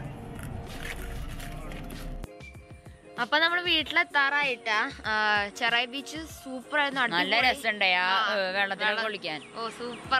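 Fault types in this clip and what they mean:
Nothing here stands out as a technical fault, so there's no fault type to list for this clip.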